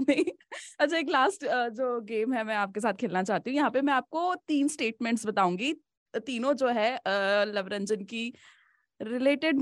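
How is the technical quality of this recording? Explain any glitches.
No glitches or technical faults can be heard here.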